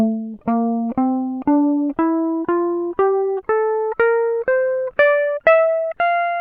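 No faults are audible.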